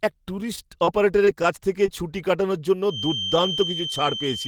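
Speech, interrupted by short concealed packet loss at 0.85, 1.25 s (just before "কাছ থেকে ছুটি কাটানোর") and 1.86 s (between "কাছ থেকে" and "ছুটি কাটানোর জন্য"). Each time, about 20 ms failed to arrive and was filled by extending the preceding sound, giving a brief smear. On a spectrogram these show as short stretches of smoothed, repeated sound. From 2.82 s to the end a feedback whistle sits at 3.1 kHz, a few dB below the speech and swelling and fading slowly, most likely from a loudspeaker-to-microphone loop hovering at the edge of feedback. A spectrogram would show it as a thin, unbroken horizontal line.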